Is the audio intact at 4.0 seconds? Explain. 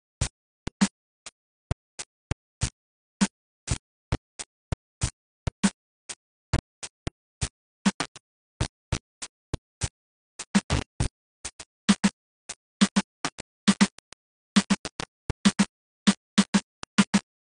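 No, at 4.0 seconds the music is damaged by two faults that run through the whole clip.

Low bit depth without dither: the signal was likely rounded to very few levels without dither, which fits 4-bit quantisation. The error tracks the music and sits almost as loud as the music itself, so quiet sounds turn gritty and grainy.

AAC compression: an AAC-LC encoder likely ran at a very low rate, pointing to about 32 kbps, and quantised the spectrum coarsely. Nothing survives above 10 kHz, so the music sounds dull and smeared, with plainly audible warbling and fizz on sustained sounds.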